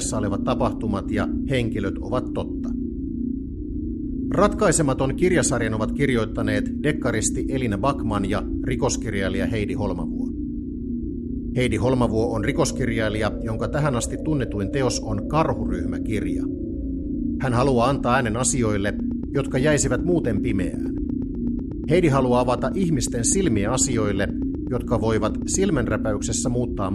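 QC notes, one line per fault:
19.0–25.9 s, train of clicks: a regular ticking sits on top of the audio at about 8.1 clicks per second, some fifty pulses in all, each much the same shape and peaking a few dB above the programme level, so they stay audible through quiet passages as well as loud ones. The steady repetition of an identical pulse points to a periodic disturbance rather than a damaged source, likely electrical interference from nearby equipment or a faulty connection or power supply.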